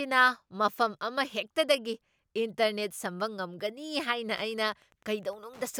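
From 4.33 s until the end of the speech clip, Wi-Fi interference appears: a nearby Wi-Fi radio's transmissions are being picked up and rectified by the audio circuitry, so its radio bursts become audible. The pattern is a steady ticking at the beacon interval of 102.4 ms, close to ten clicks a second, sitting roughly 30 dB below the speech. The regular spacing of the ticks is what identifies the beacon as the source.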